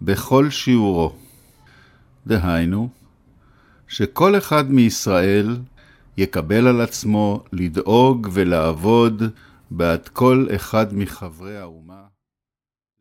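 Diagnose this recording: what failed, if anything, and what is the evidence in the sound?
Nothing here points to a failure at any stage; the only change in level is a gentle editor's fade-out that starts around 11 s and eases the sound down to silence at 13.0 s, with no click or hard edge at the end.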